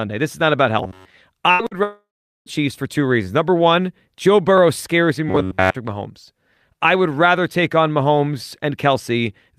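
Robotic sound from repeated short buffers appears from 0.83 to 1.15 s: the speech turns into a rigid, metallic buzz at about 93.8 Hz. This is likely caused by new audio arriving too seldom, so a buffer of roughly 10.7 ms was replayed for most of the stretch.

A burst of packet loss follows from 1.51 to 1.62 s, where the last sound is stretched and faded for about 78 ms, covering 80 ms of audio that never plays.

Short concealed packet loss comes from 1.67 to 1.74 s as a brief smear: about 39 ms of continued sound stands in for 40 ms that arrived too late.

A long network dropout runs from 1.83 to 2.49 s. The last sound is carried on and fades, leaving about 420 ms of silence, and speech resumes with 640 ms missing. An extended stall in delivery is the likely cause.

The same robotic buzz at about 93.8 Hz returns from 5.29 to 5.76 s, again from repeated short buffers.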